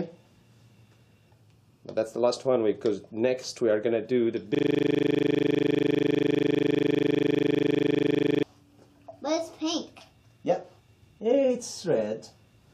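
A system hang loop runs from 4.55 to 8.43 s. The machine froze while the audio hardware kept replaying one 40 ms slice of its buffer, nearly a hundred times over, so the sound collapses into a rough, mechanical buzz repeating at 25 Hz.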